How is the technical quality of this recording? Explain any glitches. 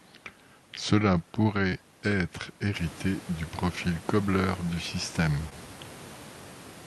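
The recording has two brief glitches, both short concealed packet loss, from 1.69 to 1.73 s and from 5.49 to 5.53 s. In each, about 20 ms of the speech stream arrived too late for the decoder. The receiver covered the gap by extending the preceding sound, continuing its pitch or its noisy character, then crossfaded back into the real signal. The result is a momentary smear or wobble rather than silence. That distinguishes it from a hard dropout, which would leave an audible hole. It also differs from a click, which is a sharp transient. The background room noise rises by about 11 dB at around two and a half seconds and stays about 22 dB below the speech. That noise comes from the room itself, not the system.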